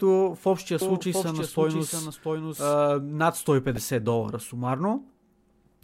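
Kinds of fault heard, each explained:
Doubled audio track, 0.81 to 2.73 s: A second full-band copy of the speech runs about 0.7 s behind the original and roughly 5 dB quieter. Its timing stays fixed, and it has no decay or room colour, so it sounds like a pasted duplicate rather than an echo. It appears and vanishes abruptly at both ends. The likely cause is the same signal reaching the mix twice, once through a slower capture path or through an edit that left two offset copies.
Corrupt frame decoded, 2.56 to 2.61 s and 3.77 s: A compressed frame arrived with flipped bits and was decoded anyway, so misread codes and gains put energy at the wrong frequencies. The first event spans about two frame lengths and peaks around -25 dBFS. The second hits a single frame and is louder, peaking around -15 dBFS.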